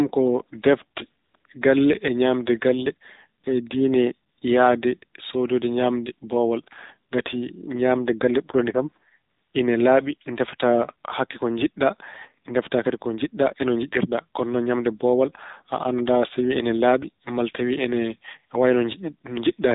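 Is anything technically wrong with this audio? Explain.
Yes. The whole clip of speech has been through an AMR narrowband mobile codec, heard here at about 7.4 kbps. The signal is band-limited to 8 kHz sampling, so nothing above 4 kHz survives, and the voice is rebuilt from a vocal-tract model fed by a handful of pulses in each 5 ms. At this low bitrate the coding damage is plainly audible: the voice sounds buzzy and synthetic, dull and boxed-in, with no air or sibilant detail.

AMR comfort noise appears at 1.24 to 1.34 s, 1.36 to 1.44 s (between "ko defte" and "galle e ñaamde galle"), 1.46 s, 3.42 s (right after "galle e ñaamde galle"), 4.30 to 4.38 s, 4.40 s (just before "yahde soodoyde"), and 9.30 to 9.54 s. In each gap the sending side judged the talker silent and sent no speech frames. The receiver then filled the gap with synthetic noise built from a coarse level and spectrum estimate. 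So the real background drops out and a smooth, steady hiss switches in for 20 to 240 ms before speech resumes.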